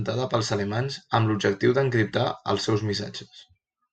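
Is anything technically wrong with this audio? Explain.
No, the speech signal comes through intact, with no dropouts, glitches or interruptions anywhere in the recording.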